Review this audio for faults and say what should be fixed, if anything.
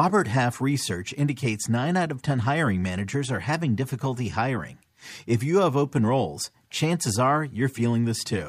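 Nothing here needs fixing, because the speech signal stays technically sound throughout, with no audible faults at any point.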